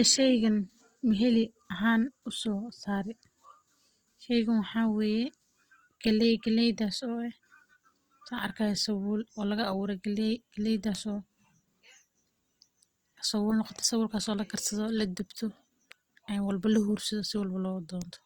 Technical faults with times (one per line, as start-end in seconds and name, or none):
0.00-18.26 Opus compression